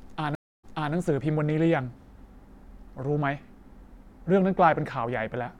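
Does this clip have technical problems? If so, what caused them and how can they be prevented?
Yes. At 0.35 s the speech cuts to silence for 0.28 s, then resumes at 0.94 s from a point 0.3 s earlier. This is a stream reconnect: the connection dropped, and a fresh decoder restarted on data the server resent. A larger network buffer and resuming from the last received position would prevent it.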